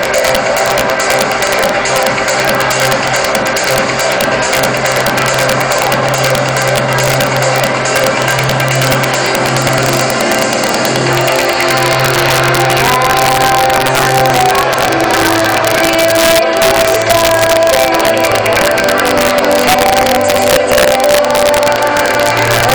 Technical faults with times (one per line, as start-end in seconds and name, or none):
0.00-22.75 integer overflow